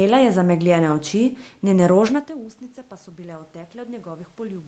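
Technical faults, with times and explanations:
3.05 to 4.67 s, automatic gain rising: after the input level fell by about 20 dB, the automatic gain control steadily raises its gain to compensate, so the voice and the background noise swell together over more than a second, continuing until the clip ends.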